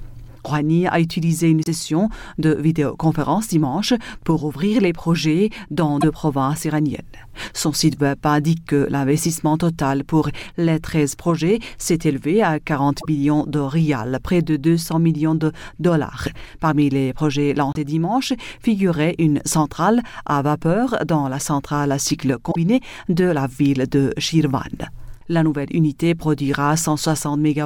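At 1.63 to 1.68 s, 6.00 to 6.04 s, 13.00 to 13.05 s, 17.73 to 17.77 s and 22.51 to 22.56 s the sound skips forward, and each gap is a brief disturbance lasting 41 to 56 ms, about two 26.1 ms MP3 frames. The likely cause is a broken MP3 bit reservoir: frames were dropped, so the following frames reached back for shared data and decoded bytes belonging to the wrong frame.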